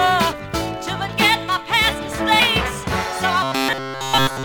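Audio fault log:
0.32 s and 2.39 s, damaged data in a compressed stream: two quick blips, each gone in a flash. Part of the compressed stream was bad at those points, so the decoder couldn't read the frames there, lost sync and had to hunt for the next good frame header. You hear that as a little chirp or squawk.
3.43 s to 4.44 s, robotic sound from repeated short buffers: the last second turns into a rigid, metallic buzz at about 133 Hz, running to the very end. New audio likely wasn't arriving fast enough, so playback kept looping a tiny slice of about 7.5 ms while the real material got skipped. Essentially all of this stretch is repeats, and looping at that rate imposes a fixed 133 Hz buzz.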